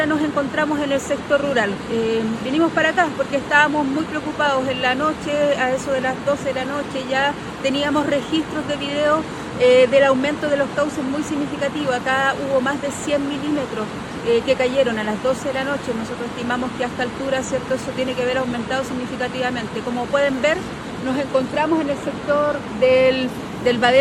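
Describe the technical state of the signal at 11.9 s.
At 11.9 s the signal is intact, with no dropout, distortion, glitch or other technical fault audible at that point.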